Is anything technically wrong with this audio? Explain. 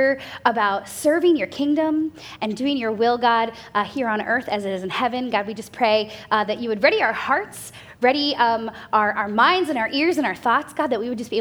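No, nothing stood out as technically wrong on listening to this audio.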